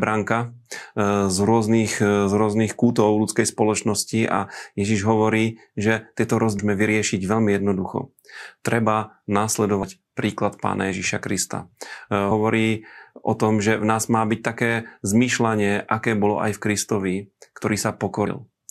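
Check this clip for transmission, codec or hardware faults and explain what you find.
There are compressed frames skipped at 6.59 s, just after "hovorí že tieto", and at 9.83 s, just before "príklad pána". They recur at 12.31 s and 18.26 s. Whole frames of about 26 ms are lost, so the speech jumps ahead by roughly 400 ms, 100 ms, 70 ms and 70 ms. Each jump is heard as a sudden skip forward in the speech.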